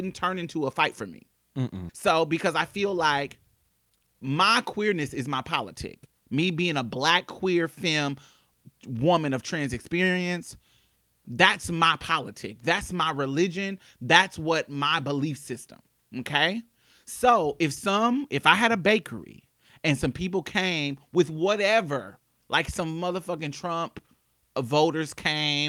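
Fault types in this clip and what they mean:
Skip ahead: At about 1.9 s the speech jumps forward. Roughly a second of audio is simply gone, and the material on either side is butted together with no silence and no filler. That happens when a receiver discards a backlog of queued audio to catch up. Unlike a dropout or packet-loss concealment, there is no gap, hum or smeared patch. The continuity just breaks, as if a piece of tape were spliced out.
Jitter buffer speed-up: From 3.56 to 5.35 s the speech runs about 17% fast, and from 5.76 to 6.29 s about 12% fast, so it sounds briefly hurried. The receiver is trimming excess buffered delay by deleting tiny pitch-period slices again and again, about a third of a second in the first stretch and about 70 ms in the second. Pitch stays put, unlike a playback-rate or resampling error, and nothing vanishes in a single chunk as with skip ahead.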